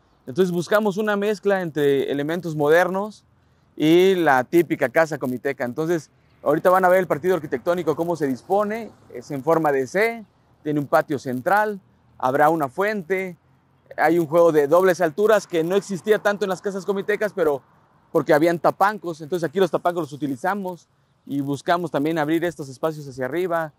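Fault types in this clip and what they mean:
Resampler restarted on every block: each 10 ms block is converted separately, fitting a 24 kHz to 48 kHz upsample, so every edge errs, giving a 100 Hz buzz only under signal. Spectrograms show vertical striations every 10 ms; waveforms show small boundary steps.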